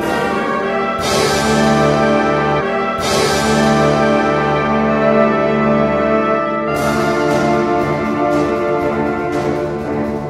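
At 2.56 s the sound jumps back and replays a stretch of itself, running until 4.55 s. This is a stream segment repeated fault. The player received or queued the same chunk twice and played both copies in sequence. About 2.0 s of material is heard a second time, so the clip runs that much longer. A small blip marks the jump back, where the audio does not join cleanly.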